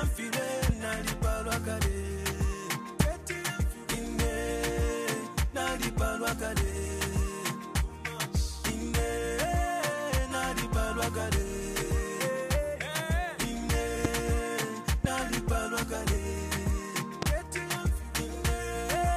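Five loud pops cut sharply through the sound, each a single hard thump lasting about a fortieth of a second and standing roughly twenty decibels above the surrounding level, at 0.69–0.72, 3.00–3.03, 14.05–14.07, 15.05–15.07 and 17.22–17.25 s. The audio continues unbroken beneath each one. These are likely brief voltage spikes from a switch, connector, static discharge or driver glitch, shaped by the downstream circuitry into a single sharp click.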